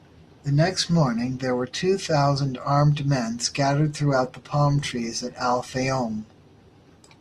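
Speech, and at 4.10 s it abruptly drops to a lower-bitrate adaptive stream through the end, with more codec grit, which points to roughly 64 falling to 24 kbit/s.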